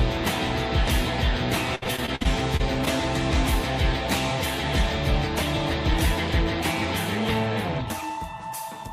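From 1.75 to 2.88 s, repeated packet loss across eight gaps, up to 63 ms each, left the playback repeating old sound, giving choppy, robotic audio.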